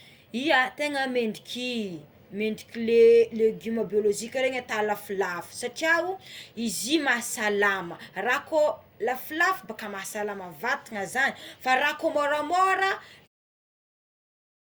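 Nothing in this speech goes wrong technically, and the only edit you'll hear is a gentle fade-out that begins around 13 s and finishes by 13.28 s, with no click or hard edge.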